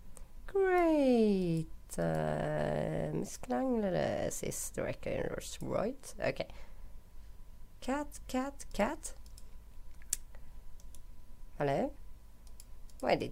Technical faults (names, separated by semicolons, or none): none